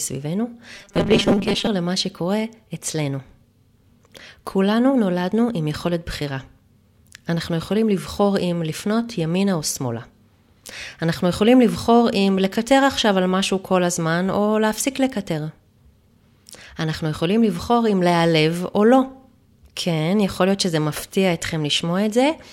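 The speech clip has robotic sound from repeated short buffers between 0.75 and 1.68 s, most likely because new audio reached the playback software too seldom, so it kept replaying the last short chunk, roughly half the time, while the real audio went missing. Those repeats stamp a fixed 200 Hz buzz onto the voice, which fits a chunk about 5 ms long, and the speech becomes a rigid, metallic drone that only loosely tracks the words.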